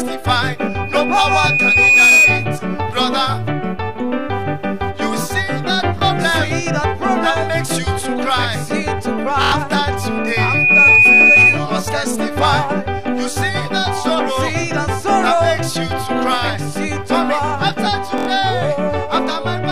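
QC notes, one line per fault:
0.58–2.59 s and 10.01–11.64 s, loudspeaker feedback squeal: a 2.5 kHz tone swells to about 10 dB above the sound, building over roughly one and a half seconds the first time and under a second the second time. The microphone is re-amplifying its own loudspeaker until that frequency runs away.
5.99–6.01 s, 9.43–9.52 s and 18.18–18.27 s, repeated buffer: a 23.2 ms slice replays with hard joins. The first event is a single short stutter. The later two loop several times, skipping about 100 ms of audio. The timing fits a 1024-sample buffer that ran dry.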